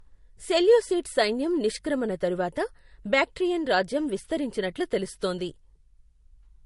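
Speech clip with a transcoding between lossy codecs fault running the whole way through: nothing above about 11.2 kHz, and two flavours of smeary artefacts stacked on each other, which fits a low-rate MP3 pass, around 48 kbit/s, likely re-encoded to Vorbis at roughly 52 kbit/s.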